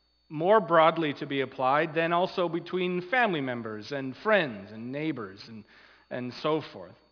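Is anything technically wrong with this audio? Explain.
Yes. Aliasing runs through the whole clip. The audio was downsampled with no anti-alias filter beforehand, and the fold point near 5.5 kHz fits a drop from 44.1 kHz to about 11 kHz. Content that sat above 5.5 kHz was mirrored back below it as new, unrelated frequencies, sitting roughly 30 dB under the signal. The result is a gritty, metallic edge on bright, hissy sounds, and a spectrum that runs hard right up to the 5.5 kHz band edge.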